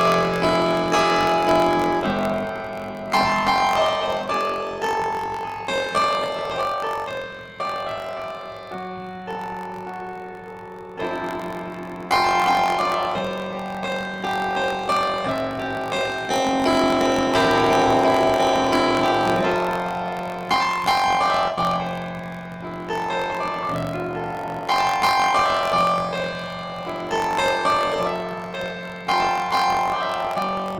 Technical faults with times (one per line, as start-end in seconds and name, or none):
0.00-30.79 planar audio read as interleaved